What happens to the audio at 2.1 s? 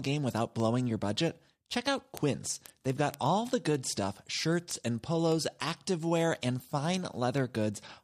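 At 2.1 s word clock ticks run, as they do from 0.12 to 7.98 s. An unlocked receiver clock, off by roughly 150 ppm, drops or repeats one sample about ten times a second. The result is sharp ticks, seen as thin vertical lines on a spectrogram.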